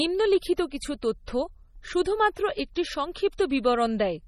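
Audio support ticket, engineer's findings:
Watery, swirling speech throughout, with metallic chirps on sibilants and smeared attacks. Treble still reaches about 20.2 kHz, so the damage comes from weak spectral lines flickering frame to frame. Likely MP3 compression, heavy, consistent with roughly 32 kbps.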